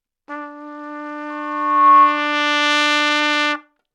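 From 1.30 to 2.31 s a single 1.1 kHz tone swells over roughly three quarters of a second to about 10 dB above the surrounding sound. This is loudspeaker feedback squeal: a microphone picked up its own loudspeaker, and the loop gain at that frequency exceeded one.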